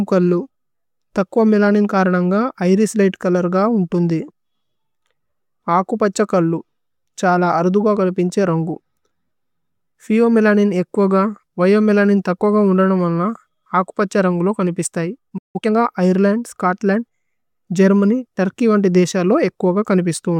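Right after "നുമന്ന അകുപഛ്യ രന്ഗുലു കനിപിസ്തയി", the speech cuts out mid-flow from 15.38 to 15.56 s. That's a playback stall: a gap of roughly 160 ms, likely because the player ran short of data or its thread got blocked, leaving the output silent until it recovered.

Straight after, from 15.56 to 15.72 s, there's time-compressed catch-up leading into "ഐര്ലന്ദ് സ്ചോത്ലന്ദ്". The player is clearing its backlog by snipping out small pieces and cross-fading over the joins. The speech runs at 2× speed but keeps its normal pitch, so it sounds rushed.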